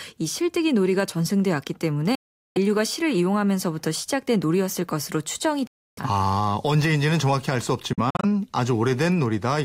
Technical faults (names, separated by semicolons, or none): Bluetooth dropout